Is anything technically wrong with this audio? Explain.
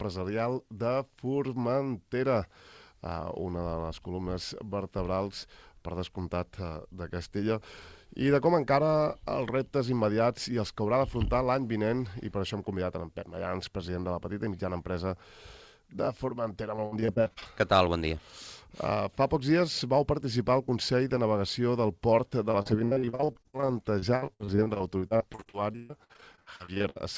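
Yes. Repeated packet loss (robotic sound) occurs at 16.76–17.47 s and again at 22.51–26.98 s. Packets kept going missing, and each hole was patched by stretching the preceding sound. About a third of each stretch is patched this way, with gaps up to 60 ms and 136 ms, leaving choppy sound with pieces missing. The sound also shows the call path's band limit, with nothing above 8 kHz, which fits a G.722 wideband codec.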